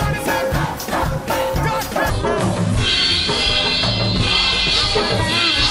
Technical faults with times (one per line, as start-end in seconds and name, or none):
2.10-5.70 section at the wrong speed